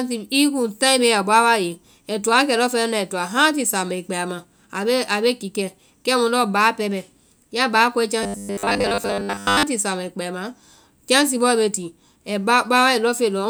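From 8.23 s to 9.63 s, between "bɛ ya báa kɔe" and "samaãĩ kpɛ ama", the speech collapses into robotic sound from repeated short buffers: a rigid, metallic buzz near 100 Hz that only loosely tracks the syllables. The likely cause is audio arriving too slowly, so a 10 ms slice is replayed over most of that stretch while real audio is lost. Unlike dropouts, there is no silence, just a fixed pitch.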